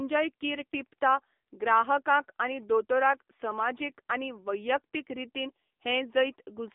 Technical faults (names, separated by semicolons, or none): AMR narrowband mobile codec